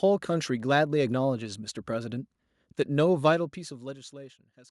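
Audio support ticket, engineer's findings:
No faults found on listening; speech path checks out, nothing to action.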